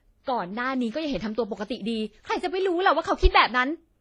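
Throughout, the speech carries mixed codec artefacts and a dulled top end. This likely comes from transcoding between lossy codecs, fitting WMA then HE-AAC.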